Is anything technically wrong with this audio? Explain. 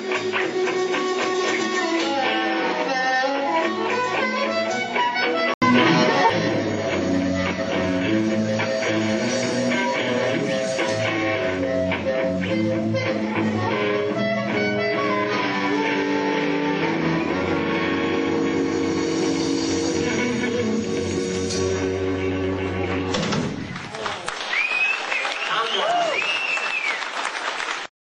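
Yes. From 0 to 5.62 s the sound is dull and a few decibels quieter, with nothing above 7.6 kHz and a faint noise floor of its own. An 80 ms gap follows before it brightens. The likely cause is an input switched to a poorer, narrower-band device before recording returns to the better one.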